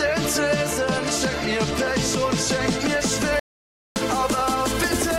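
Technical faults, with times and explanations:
3.39 to 3.96 s, audio dropout to silence: the sound stops abruptly mid-flow and the next 0.57 s is silent, with no room tone or background hiss underneath, before the audio resumes just as suddenly. A pause in the source would leave some ambient floor, so a gap this empty points to the input signal vanishing while the recording kept writing silence, likely from a momentary disconnection or mute. Whatever sounded during that half-second is lost.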